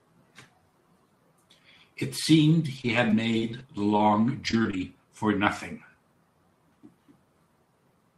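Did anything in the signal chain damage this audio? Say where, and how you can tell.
Yes. Scattered short gaps from 2.77 to 4.83 s point to the network stage: roughly seven lost or late packets, the longest about 30 ms, each patched by the receiver extending the preceding sound, leaving brief ticks and smeared hiccups in otherwise clear speech.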